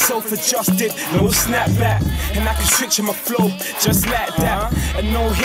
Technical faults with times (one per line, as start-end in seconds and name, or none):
none